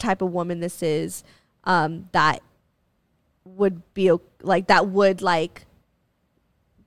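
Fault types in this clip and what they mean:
No technical faults can be heard in this speech recording. There is nothing to list under any fault type.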